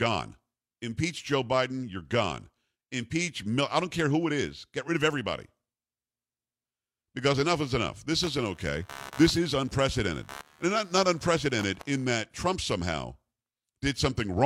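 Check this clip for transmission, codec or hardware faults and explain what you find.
One hardware fault is present. Computer activity noise runs from 8.23 to 12.05 s. Shifting load in the computer, from the processor, graphics card or mouse, disturbs the ground that the audio circuitry shares with it, and that disturbance rides into the signal. It comes through as a buzzy, chirping texture pulsing at around 70 Hz, sitting roughly 20 dB below the speech, and it follows the machine's activity rather than anything in the speech itself.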